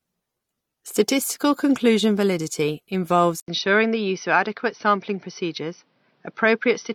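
At 3.4 s the speech breaks off for about 80 ms. When it returns, it sounds duller and boxier, and it stays that way to the end. Nothing reaches above 6 kHz after the gap. A faint new background noise sits well below the voice. The loudness barely changes. The likely cause is an input switched to a poorer device partway through the recording. That device passes a narrower band and adds its own noise.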